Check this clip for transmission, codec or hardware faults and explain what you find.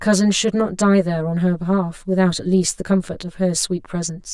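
The speech carries one fault throughout: channel delay (comb filtering). One channel trails the other by roughly 10 ms, and mono summing cancels evenly spaced frequencies from around 50 Hz upward, leaving the speech hollow and phasey.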